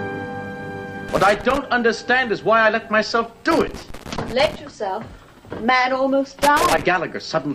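Loose connector crackle bursts at 1.09–1.58 s, 3.51–4.55 s and 6.42–6.83 s, a contact making and breaking intermittently, chopping the audio into irregular scratchy pops.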